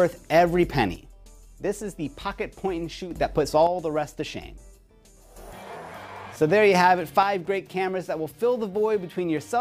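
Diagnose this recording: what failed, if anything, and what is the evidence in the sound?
The level falls abruptly by about 6 dB three times, from 0.96 to 3.11 s, from 3.67 to 5.36 s, and from 7.23 s to the end at 9.60 s, the first two times snapping straight back. This is the pattern of one channel dropping out, likely an intermittent connection in the analogue wiring: with one side lost, the mono sum keeps only half the shared material. Unlike a fade or gain dip, the steps are instant and exactly half-level.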